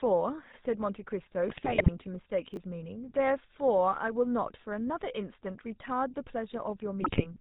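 Across the whole recording the speech carries the buzzy, gravelly roughness of the GSM full-rate codec, consistent with the 13 kbps full-rate mode. The codec rebuilds the voice from a vocal-tract filter driven by regularly spaced pulses, so the excitation is coarse and nothing above 4 kHz survives. Unlike a plain low-pass or narrowband filter, which only dulls the sound, this adds a grainy, rasping texture to every voiced sound.

From 1.48 to 1.90 s GSM bit errors break the speech into squawks, pops and gargling. Corrupted filter, pitch and gain values make individual frames swell in level or twist the spectrum, which points to roughly 2% of bits flipped across about twenty 20 ms frames. This differs from packet loss, which leaves gaps or smeared repeats. Here the decoder keeps producing sound, but it is garbage sound.

At 2.54 to 2.57 s a 10 ms chunk of audio plays two chunks late, after the material that should follow it. 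No audio is lost, but the three hard joins give a quick garbled stutter. A dropout would instead leave a hole, and a repeat would play the same sound twice.

The GSM bit errors return from 7.00 to 7.26 s, a shorter burst of the same squawking and gargling. It fits a heavier error rate, around 3%, spread over about ten frames.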